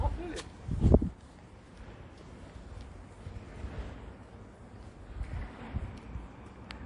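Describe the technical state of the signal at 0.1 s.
At 0.1 s, and throughout, the sound shows MP3 compression damage, likely from a low bitrate: nothing above 11.2 kHz, plus watery, swirling artefacts that a plain low-pass filter wouldn't add.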